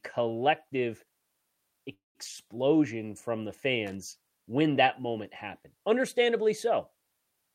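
Call audio freeze, 1.93 to 2.17 s, in this speech clip: the sound stalls into a fading continuation, then about 170 ms of silence, likely from delayed packets draining the jitter buffer, and resumes intact, 216 ms later. Loose connector crackle, 3.87 to 3.95 s: a short irregular burst of scratchy crackle as a faulty contact rapidly breaks and remakes the signal path.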